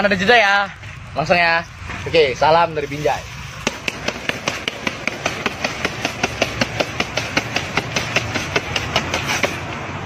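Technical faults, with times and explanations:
0.00–6.28 s, Wi-Fi interference: the audio circuit rectifies a nearby Wi-Fi radio's beacon every 102.4 ms, giving faint steady ticking about ten times a second, roughly 35 dB down.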